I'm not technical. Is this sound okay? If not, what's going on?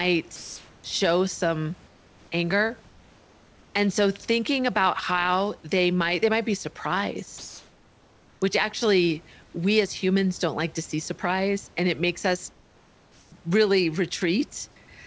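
No, not quite. In the pauses, the real room background gets swapped for comfort noise: a smooth, featureless hiss, sometimes slightly softer or louder. It happens at 0.36–0.84 s (just before "show some anger"), 1.88–2.32 s, 2.88–3.74 s, 7.38–8.42 s (leading into "which actually"), 9.44–9.54 s, and 12.52–13.32 s (right after "and it makes us"). The likely cause is the call's sender going quiet during silences and the receiver filling in with made-up noise.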